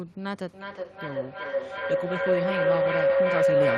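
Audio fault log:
0.43–3.78 s, feedback howl: the microphone-to-loudspeaker loop gains level on each pass, so repeats grow and narrow to a tone near 500 Hz, pulsing roughly every 400 ms and peaking about 9 dB above the speech. A spectrogram shows a brightening horizontal band, and the waveform a swelling envelope.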